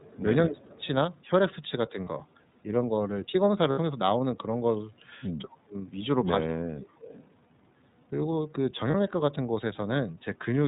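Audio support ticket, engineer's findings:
Muffled, slightly rough and synthetic throughout, no content above 4 kHz. iLBC codec, narrowband, each frame coded independently; fits 30 ms mode at 13.33 kbps.

Faint delayed copy of the sound about 200 ms behind at 0.0–0.2 s and 0.78–0.86 s (about 30 dB down) and 7.0–7.26 s (about 20 dB down). Echo leak, likely far-end loudspeaker echo escaping the canceller.

Level dips, up to roughly 25–30 dB, at 0.45–0.83 s, 5.43–5.75 s and 6.43–6.93 s. Speech suppressed in double talk; canceller likely attenuating both talkers at once.

Brief held, buzzy vowel-like sound at 2.04–2.08 s, 3.72–3.79 s and 8.90–8.94 s, with instant recovery. Lost iLBC frames concealed by pitch repetition; fits one, two and one 30 ms frames.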